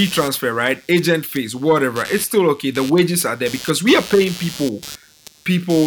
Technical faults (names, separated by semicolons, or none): computer activity noise